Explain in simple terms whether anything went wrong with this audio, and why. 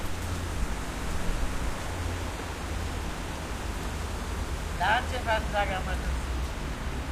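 Nothing went wrong: no faults are audible anywhere in this audio.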